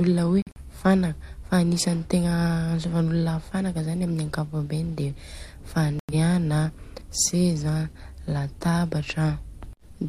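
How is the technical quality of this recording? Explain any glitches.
Two short dropouts cut into the speech, both corrupt frames muted. At 0.42 s the audio drops out abruptly for about 0.19 s, and at 5.99 s for about 0.15 s, which fits two or three frame lengths. The decoder rejected the damaged frames and the player filled the gaps with silence, so timing holds.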